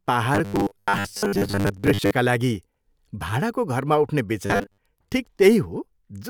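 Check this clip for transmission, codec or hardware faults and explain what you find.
The speech carries two stretches of robotic sound from repeated short buffers, from 0.35 to 2.11 s and from 4.46 to 4.80 s, the second just after "भाडाको घरमा उठ्ने". The likely cause is audio arriving too seldom, so the receiver keeps replaying its last short block, roughly 10 ms long, while most of the real signal is dropped. That loop imposes a fixed 100 Hz buzz, making the voice rigid and metallic while still loosely tracing the words.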